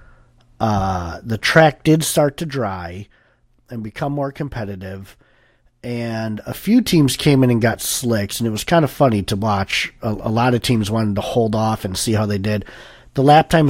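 No technical faults are audible anywhere in the speech.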